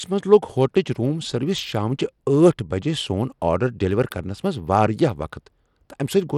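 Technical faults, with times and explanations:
Throughout: Bluetooth SBC compression, likely. Treble flickers and gritty noise rides on the speech, fitting a bitrate of 96 kbps. Nothing sounds above 19.6 kHz.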